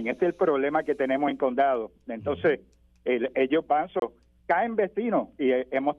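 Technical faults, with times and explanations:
3.99 to 4.02 s, CD skip: The sound cuts to silence for about 30 ms. It then resumes from a different point, not where it left off. A knock or a flaw on the disc threw the laser off its track onto another turn of the spiral. The player muted briefly while it relocked. It then carried on reading from the new position, so the sound jumps abruptly.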